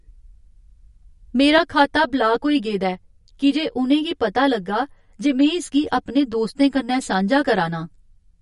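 MP3 compression throughout: nothing above 11.2 kHz, with watery, swirling speech and smeared consonants, likely from a low-bitrate encode, which fits roughly 47 kbps.

Channel delay (comb filtering) from 1.58 s to the end: one channel arrives roughly 10 ms late and mixes with the other, cutting evenly spaced notches from around 50 Hz upward, so the speech sounds hollow and phasey.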